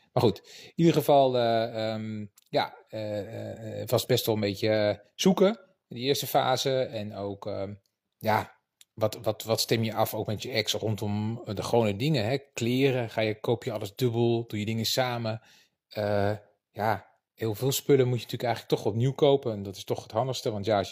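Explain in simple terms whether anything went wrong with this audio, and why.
A small patch of the compressed file was damaged, so right at 0.36 s the decoder couldn't read that stretch properly and had to hunt for the next good frame. That is damaged data in a compressed stream, heard as a brief glitchy blip in the speech.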